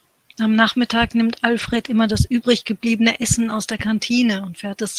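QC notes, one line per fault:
1.59–1.89 s and 3.71–3.77 s, lost packet rebuilt from error correction: the sound keeps running with no gap, but goes briefly rougher and grainier, longer in the first stretch than in the short second one. Packets went missing here, and the decoder filled each hole with the low-bitrate backup copy carried inside the following packet, so continuity survives while the reduced detail of that copy comes through as coarseness and added noise.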